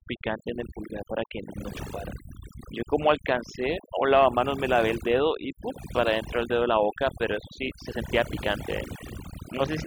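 Throughout, overdone noise removal gates frequency bands near the noise floor, leaving speech over twinkling silence; a spectrogram shows scattered isolated specks between ragged, hollowed harmonics.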